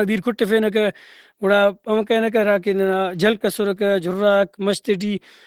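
Throughout the speech, the sound points to low-rate Opus compression, likely encoded around 16 kbps in its hybrid speech mode. Starved of bits, the encoder fills bands coarsely, so the voice comes out muffled, hoarse and grainy, though content still reaches about 20.2 kHz.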